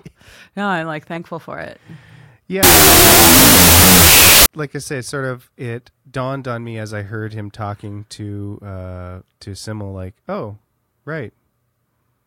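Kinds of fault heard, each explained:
Wrong sample width: audio stored as 32-bit float was read back as 16-bit integers, so each sample was split into two values built from unrelated halves of a float, and only some of them carry the top bits of the real signal. From 2.63 to 4.46 s the speech turns into loud noise with the original buried inside it. Doubling the sample count plays that stretch at half speed, an octave lower in pitch.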